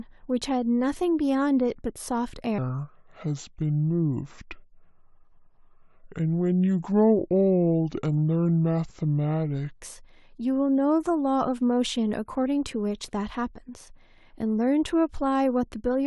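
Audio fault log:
2.58–9.79 s wrong sample rate: speech slows to two-thirds speed and drops 7 semitones, sounding low and dragging. This fits 48 kHz audio played back at 32 kHz.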